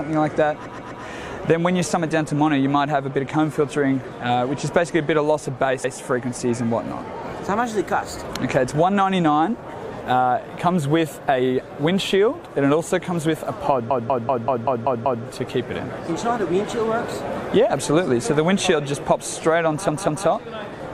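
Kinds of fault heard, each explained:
Repeated frames: the sound stutters, replaying a short fragment one or more times: 128 ms chunks at 0.66 s and 5.84 s, 192 ms chunks at 13.90 s and 19.89 s, the longest adding 1.3 s. A run of compressed data was stored or sent more than once, so the decoder plays it again.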